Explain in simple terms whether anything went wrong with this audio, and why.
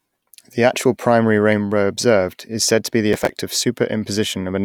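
Right after "said to be the", from 3.13 to 3.30 s, there is processor overload crackle: a brief gritty tearing. The processor fell behind and missed around twenty tiny audio chunks, each roughly 5 ms long, in quick succession. Each miss dropped a sliver of sound, leaving hard-edged gaps.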